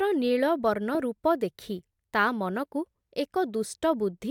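No technical faults can be heard anywhere in this speech recording.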